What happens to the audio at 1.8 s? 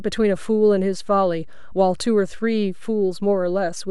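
At 1.8 s the speech carries a DC offset, present from start to end. The whole waveform sits shifted off zero by a constant of about -32 dBFS. It is not heard as a sound. It wastes headroom and shows as steady energy at 0 Hz.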